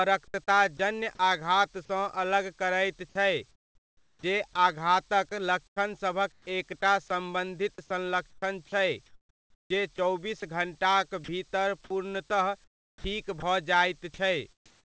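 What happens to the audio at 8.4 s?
At 8.4 s the speech falls inside a stretch, 7.74 to 10.42 s, where the sender's voice detector likely toggled transmission repeatedly, replacing about 0.9 s of quiet speech edges with comfort noise. The speech sounds chopped.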